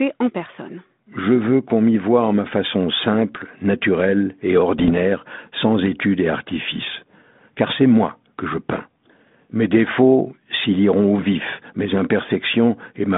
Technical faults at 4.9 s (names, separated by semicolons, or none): bit errors on an ADPCM link